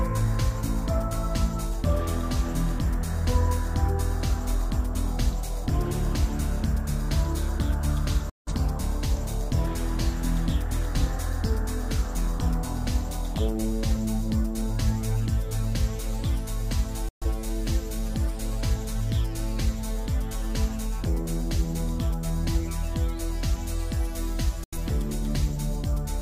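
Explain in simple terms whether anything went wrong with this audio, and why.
Something did go wrong. The sound has three digital broadcast dropouts. The audio cuts out at 8.30 to 8.52 s, at 17.09 to 17.26 s, and at 24.64 to 24.78 s. Each gap is short, about a tenth of a second or a bit more. The sound snaps off almost instantly and comes back after the gap. This happens when the receiver loses a few frames of the digital signal and mutes until good data arrives. Whatever was sent during those gaps is lost.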